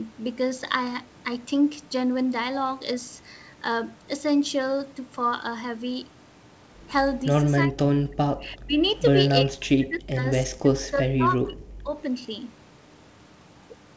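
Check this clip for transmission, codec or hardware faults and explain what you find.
One fault appears, in three bursts: 7.67–8.78 s, 9.43–10.25 s and 10.52–11.92 s. In each, the speech drops by up to about 40 dB. This is likely speech suppressed in double talk. With both sides talking, the echo canceller couldn't separate the near talker from loudspeaker echo, so it turned both down. Nothing is heard above 8 kHz, which fits the G.722 wideband call path.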